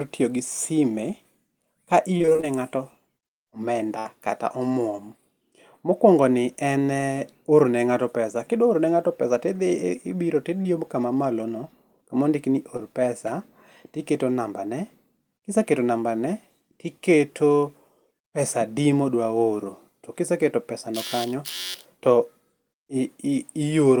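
From 2.17 to 2.45 s the speech turns choppy and robotic, with small pieces dropping out. This is repeated packet loss: seven gaps, none longer than 24 ms, each patched by extending the preceding sound, so roughly half that stretch is filled-in audio.

At 3.99 to 4.07 s the speech stalls into a held, fading continuation of the last sound, then jumps ahead. This is a burst of packet loss: about 60 ms arrived too late or not at all, and the receiver stretched the prior sound while turning it down.

Brief smears appear at 10.63 to 10.67 s and at 12.77 to 12.80 s, the second right after "no kama ondik ni". Each is a short concealed packet loss, where about 20 ms went missing and was filled by continuing the sound before blending back into the real audio.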